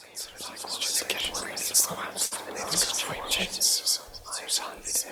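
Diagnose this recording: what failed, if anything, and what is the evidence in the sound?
At 2.25 to 2.33 s the sound hangs on one moment, held with a slight buzz or dip, then resumes exactly where it paused. That is a short stall from a late packet in the network path: the jitter buffer ran dry and about 58 ms was filled in, adding 58 ms of delay.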